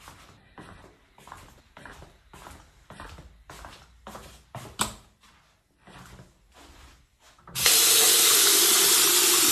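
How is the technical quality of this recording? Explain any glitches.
The recording has one brief glitch, a corrupt frame decoded at 1.57 to 1.60 s. For about 30 ms, a couple of compressed frames with damaged bits were played as if valid. Misread gain values and codes put energy at frequencies where none belongs, heard as a faint blip or chirp peaking at about -45 dBFS. A spectrogram would show a short, sharp-edged block of stray energy unrelated to the surrounding audio. The waveform would show only a small disturbance.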